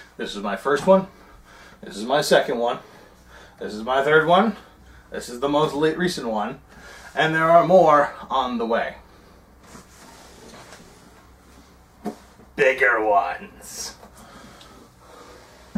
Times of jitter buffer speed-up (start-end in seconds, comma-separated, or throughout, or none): none